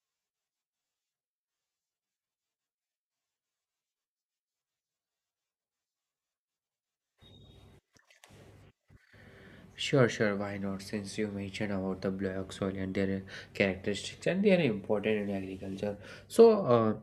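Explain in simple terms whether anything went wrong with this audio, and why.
Nothing went wrong: the recording of speech runs without any dropouts, clicks, distortion or other audible faults.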